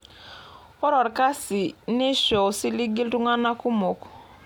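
No technical faults can be heard in this recording.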